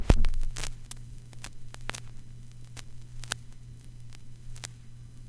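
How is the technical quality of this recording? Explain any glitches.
No glitches or faults heard.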